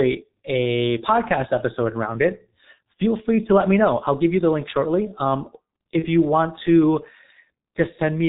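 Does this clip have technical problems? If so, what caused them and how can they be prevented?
Yes. Throughout, the speech sounds muffled and hoarse, with smeared consonants and no brightness above about 4 kHz. This is the G.723.1 codec at a very low bitrate, around 6.3 kbit/s, and the damage is heavy. The codec discards everything above telephone bandwidth and models the voice coarsely in 30 ms frames, so fast changes in the sound get blurred together. Using a wideband codec with a higher bitrate, such as Opus, would prevent this.

From 5.99 to 6.07 s there is a short smeared stretch where the speech turns briefly weak, then recovers. This is VoIP packet loss concealed by the speech codec. About 30 ms of audio went missing, which fits a single lost frame. The decoder filled the gap by repeating its last pitch and spectral shape at falling gain. Because each frame depends on the previous one, the distortion runs past the gap itself. 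A steadier network path, a jitter buffer, or forward error correction would prevent it.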